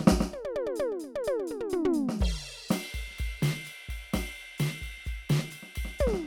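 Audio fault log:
No technical problems are audible anywhere in this music.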